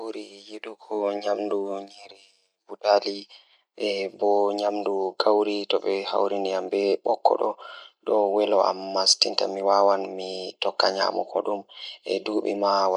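No technical faults can be heard anywhere in this speech recording.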